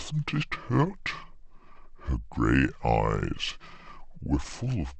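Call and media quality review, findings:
Wrong sample rate, entire clip: speech slow and low, running at 0.73x speed with pitch down about 5.5 semitones. Playback clock mismatch, no resampling; the ratio fits 44.1 kHz audio played out at 32 kHz. Check output device rate negotiation.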